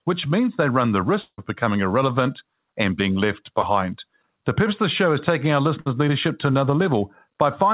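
At 1.22 to 1.40 s, right after "means they run the", the sound stretches into a fading buzz for about 160 ms, then about 60 ms of silence, before resuming at "becoming irrelevant and being". This is a long network dropout, likely, with roughly 160 ms of audio never arriving and the receiver extending the last sound until it gave out.

Two short concealed packet losses follow, at 3.62 to 3.65 s and at 6.83 to 6.87 s just after "leadership to". Each is a brief smear or wobble. About 20 ms failed to reach the decoder in time, and 10 to 15 ms of synthesised continuation was blended back into the real signal.

At 5.81 to 5.96 s, between "show is taking our" and "leadership to", a held, dimming continuation of the last sound replaces the audio for about 50 ms. This is a burst of packet loss: about 60 ms went missing, and the receiver stretched the previous sound over the hole while turning it down. 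The continuation, heard through the call path's 4 kHz band limit, jumps ahead without the lost part.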